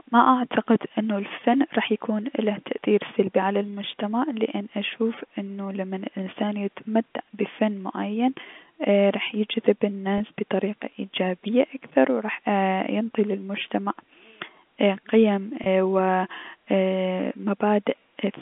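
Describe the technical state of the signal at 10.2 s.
Packet loss with pitch repetition occurs from 10.18 to 10.20 s, where about 20 ms of audio goes missing, which fits a single dropped packet on this G.711 telephone line. The receiver bridges the hole by replaying the last pitch period of the speech it still holds. Because the gap is so short, the patch never reaches silence. Instead the voice seems to hang on one slightly held, buzzy tone for an instant before normal speech resumes.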